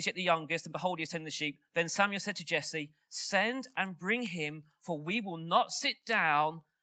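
Nothing stood out on listening to this call-processed speech, whose top end stops at about 8 kHz as expected for an Opus call at 32 kbps.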